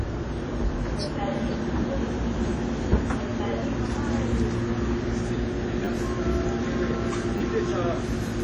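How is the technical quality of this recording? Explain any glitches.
The recording is heavily degraded throughout by lossy coding, and it has two brief stutters near the end.

Across the whole clip the sound is washy and ringing, with a hiss that swells and fades with the signal and no content above 12.4 kHz. This is likely WMA compression at a low bitrate, around 32 kbps. The long transform blocks smear quantisation noise over tens of milliseconds and zero out weak components. On a spectrogram this shows as a hard ceiling at 12.4 kHz, with patchy holes and blocky smearing below it.

At 5.85–5.87 s and again at 7.38–7.40 s there is a repeated buffer. New audio arrived late, so the same short slice, which fits a 10 ms buffer, played two extra times with a hard join at each repeat. About 20 ms of real audio is lost each time. With a slice this short, each event is heard as a click or brief buzz. 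In the waveform, identical 10 ms segments sit side by side with abrupt seams, and on a spectrogram each event appears as a thin vertical streak.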